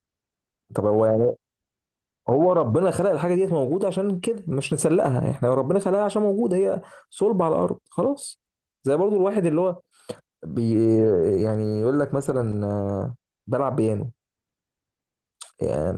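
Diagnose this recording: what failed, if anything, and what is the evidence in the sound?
Nothing failed; no faults heard.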